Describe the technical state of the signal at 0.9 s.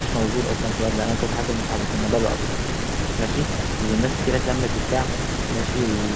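At 0.9 s the speech is intact, with no fault present; the content above 8 kHz is simply absent, as expected for a call carried over a G.722 codec.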